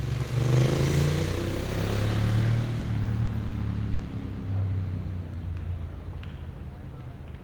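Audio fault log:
2.79–3.53 s, repeated stalls (stutter): packets kept arriving late and the jitter buffer ran dry four times, so about 100 ms of held sound, up to 40 ms at once, makes the audio drag and stutter.
3.93–4.01 s, short stall from a late packet: delay jumped by 60 ms, emptying the buffer; the last sound is stretched about 60 ms, then resumes with nothing lost.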